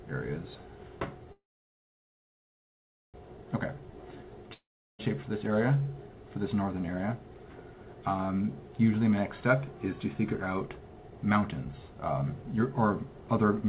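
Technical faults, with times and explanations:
1.32–3.16 s, call audio freeze: Packets were likely held up in transit and the jitter buffer ran dry, so the receiver had nothing to play for 1.82 s. It carried the last sound on only briefly before the gap settled into silence for about 1.73 s. When the packets arrived, playback resumed exactly where it had stopped. Nothing is lost, but a pause has been inserted and everything after it runs 1.82 s later.
3.74–3.92 s, jitter buffer slow-down: The buffer was running low, so the receiver rebuilt a reserve by repeating tiny slices of the waveform over and over. Those repeats add 37 ms over this short stretch, stretching the audio to 83% speed while the pitch stays put. The sound is audibly drawn out for this moment rather than lowered in pitch.
4.53–5.01 s, long network dropout: Here a run of packets was likely lost outright rather than delayed. 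The receiver filled 0.45 s by extending the last sound, which quickly gave way to about 0.37 s of silence. When audio returns, it picks up further along, with 0.46 s of the original simply gone. The listener hears a hole followed by a jump forward, not a pause that resumes in place.
10.14–13.69 s, jitter buffer speed-up: Too much audio had built up in the buffer, so the receiver cut the excess delay by trimming short pitch-period pieces many times in a row until the clip ends. About 0.4 s is removed in total, pushing playback to 110% speed at unchanged pitch. The final stretch sounds hurried, above the point where acceleration starts to become noticeable, within the narrowband G.711 sound that carries nothing above 4 kHz.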